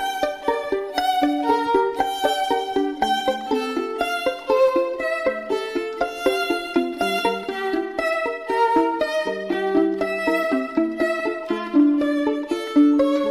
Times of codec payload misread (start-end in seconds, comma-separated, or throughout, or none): none